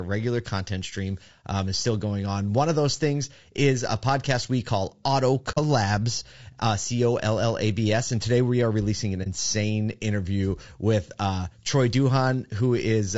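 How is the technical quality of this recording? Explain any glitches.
The technical quality is compromised: the speech carries constant coding damage, and it drops out briefly twice.

Low-delay AAC compression runs through the whole clip and is plainly audible. The voice sounds rough and grainy, with noise filling the gaps between harmonics and a thin, somewhat synthetic top end. This is likely AAC-ELD, the low-delay codec used for video calls. Its short frames resolve pitch harmonics poorly, and the damage fits a low bitrate of about 32 kbps. Unlike wideband hiss, the graininess follows the voice and disappears in pauses.

AAC frame loss with muting leaves a soft hole at 5.51 to 5.58 s and a brief dip at 9.23 to 9.27 s. The first lasts about 60 ms, which fits two lost frames, and the second about 30 ms, which fits one. The decoder zeroed the missing spectrum, and the overlapping windows fade the sound out and back in. 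The result is a smooth, brief drop, unlike a hard dropout. Nothing is repeated or smeared across the gap, which rules out concealment by repetition.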